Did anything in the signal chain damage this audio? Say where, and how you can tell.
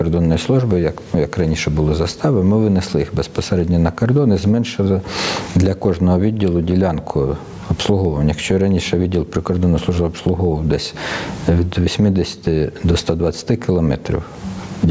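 Yes. Gain pumping runs through the whole clip, in the capture stage before the call processing. The level is pulled down under each loud sound, with a swing of roughly 20 dB. The likely cause is input gain set far too high, with a fast limiter repeatedly clamping it.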